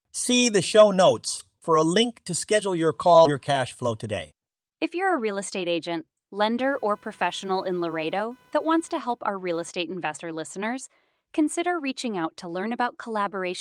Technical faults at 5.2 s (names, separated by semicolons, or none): none